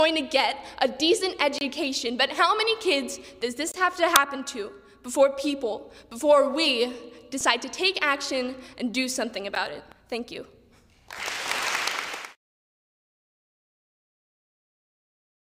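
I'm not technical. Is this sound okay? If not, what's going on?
No, it has three kinds of fault.

Block of digital silence at 1.58–1.61, 3.72–3.74 and 9.55 s: the playback program likely ran out of sound to send, so the sound briefly cuts out. The shortest, at 9.55 s, is heard as a tick rather than a gap.

Corrupt FLAC frame at 4.16, 7.41 and 11.44–11.52 s: damaged data in the file is decoded as garbage, giving a click or a harsh burst of noise, loudest at 4.16 s.

Compressed frames skipped at 9.82–10.01 s: pieces of the file were missing or rejected, so the sound jumps ahead about a tenth of a second.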